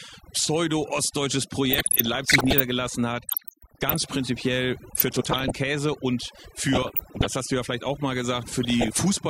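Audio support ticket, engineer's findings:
Overdone noise removal, whole clip. Background dropped, broken into twinkling specks; quiet parts of speech lost. Noise reduction set too strong, gating bands near the noise estimate. Steady throughout, unlike the burst-limited burbling below.

DAB burbling, five bursts: 1.65–2.60 s, 3.29–3.96 s, 4.95–5.52 s, 6.66–7.26 s (ends just before "hast du ja vielleicht"), 8.63–9.03 s (right after "ja vielleicht auch mal"). Residual bit errors, under one percent, corrupting MP2 sub-band levels frame by frame.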